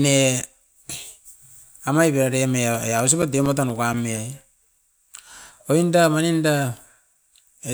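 A scratch on the disc destroyed more data than error correction could rebuild on each rotation, so the player patched or muted the damaged samples. In this speech recording that produces CD scratch ticks: eight brief clicks, the longest around 7 ms, recurring about five times a second from 2.75 to 4.41 s.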